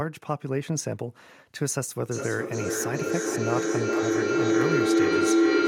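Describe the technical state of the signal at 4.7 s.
Feedback howl, 2.11 s to the end: a self-reinforcing loop builds a tone near 300 Hz, pulsing roughly every 0.4 s, peaking about 7 dB above speech.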